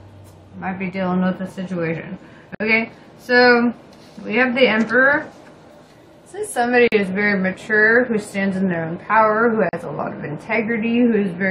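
Short holes open at 2.55 s (about 56 ms), 6.88 s (46 ms) and 9.69 s (41 ms), each a gap at a join of encoded pieces: leftover encoder delay and padding leave short silences with smeared edges before the sound resumes.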